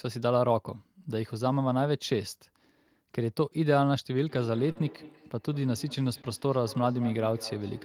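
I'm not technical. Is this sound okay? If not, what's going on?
No. From 4.26 s to the end, there is feedback echo between two devices. Two devices on the same call are in one room. One plays back what the other sent, and its microphone catches it again. Each word returns about a fifth of a second later, fainter and thinner.

There are also two moments of short concealed packet loss. At 4.71 s, 40 ms of sound never arrived, and at 6.21 s, 20 ms was missing. The receiver patched each gap by stretching the sound around it. You hear a brief smear or wobble.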